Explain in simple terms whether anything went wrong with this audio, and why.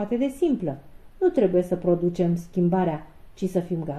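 The sound is dull and muffled from start to finish, with a gurgling, grainy texture. That points to MP2 compression, likely squeezed too hard: the upper frequency bands get switched off and flicker, and what remains is stored too roughly.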